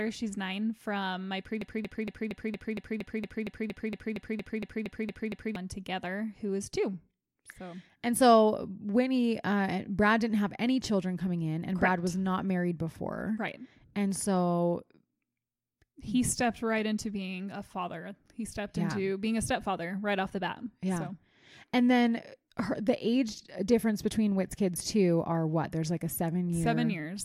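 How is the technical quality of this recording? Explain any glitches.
The recording has one serious glitch, a broken-record loop from 1.62 s to 5.56 s. Right after "nine from my", a fragment of about 0.23 s repeats exactly, back to back, 17 times, giving a stuttering, mechanical chatter for nearly four seconds before the audio resumes at "together who is two". The likely cause is a stall in the player, encoder or stream, which kept resending the last fragment it held. Whatever should have played during that stretch is lost.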